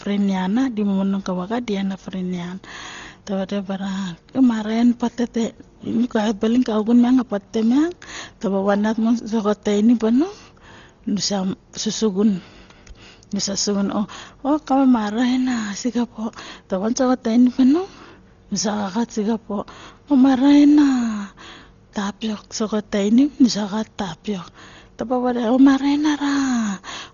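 Throughout, the speech sounds dull, with nothing above 6.9 kHz and rough flutter around tones, likely from heavy Dolby Digital compression at roughly 32 kbps.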